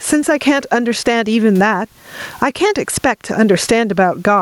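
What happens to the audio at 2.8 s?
At 2.8 s the speech is affected by gain pumping, which runs through the whole clip. The likely cause is input gain set far too high, with a fast limiter pulling it down on every loud syllable and releasing it in the gaps. The level swings by around 20 dB, and the room noise sits about 44 dB below the speech. On the waveform the envelope looks squashed and flat-topped.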